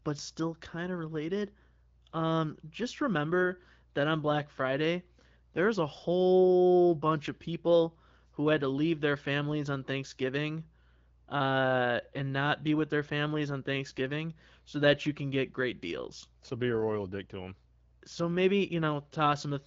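No technical faults can be heard anywhere in the speech. It comes through an AMR wideband (HD Voice) codec, with nothing above about 7.5 kHz and only light coding character, which fits a rate of around 12.65 kbit/s, where this codec keeps speech clear.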